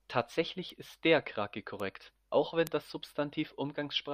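Bit error spikes tick at 0.70 s before "ist der", 1.80 s before "auch wenn das", and 2.67 s after "auch wenn", peaking around -28, -22 and -10 dBFS. Each is a flipped bit jumping one or two samples, so unlike dropout clicks, they're broadband and ignore the speech.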